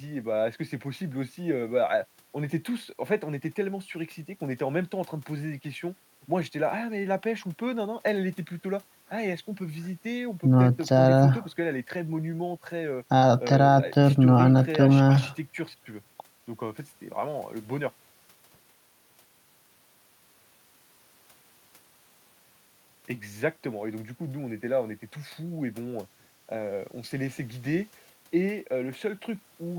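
No technical faults occur at any point in the recording.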